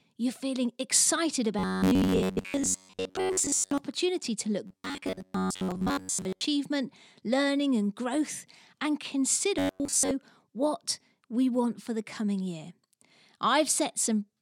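Speech, with robotic sound from repeated short buffers in three stretches: 1.59 to 3.78 s, 4.67 to 6.43 s and 9.59 to 10.11 s. In each, the speech becomes a rigid, metallic buzz fixed at 93.8 Hz that only loosely tracks the syllables, and most of the audio in those spans is lost. The likely cause is data arriving too slowly, so playback loops a segment of about 10.7 ms, which imposes that fixed pitch.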